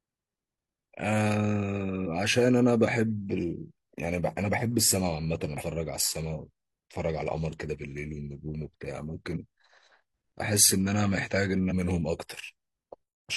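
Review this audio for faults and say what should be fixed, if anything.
Damaged data in a compressed stream causes brief glitches at 2.03–2.08, 5.57–5.63, 9.32–9.37 and 11.67–11.72 s. The decoder misreads corrupted frames until it resyncs, leaving short broadband smears on the spectrogram and jagged bursts in the waveform. Re-fetch or re-encode from an intact source, and use checksummed transfer or error-protected streaming.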